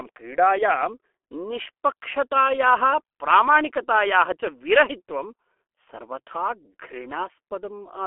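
Running throughout, the G.723.1 codec's slow 30 ms frames and low bitrate, consistent with about 6 kbit/s, cut everything above 3.7 kHz, leaving the speech muffled, hoarse and smeared at consonants.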